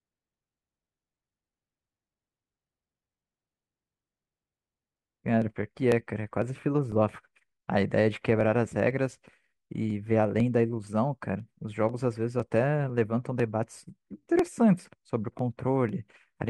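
From 0.43 to 16.39 s, periodic USB or driver dropouts skip about a millisecond every 0.5 s, heard as regular ticks and seen as thin vertical broadband lines at waveform discontinuities.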